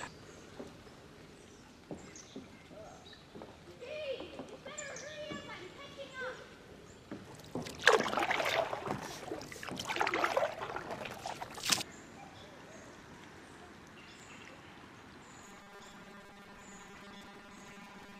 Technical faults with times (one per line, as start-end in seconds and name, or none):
15.45-18.20 robotic sound from repeated short buffers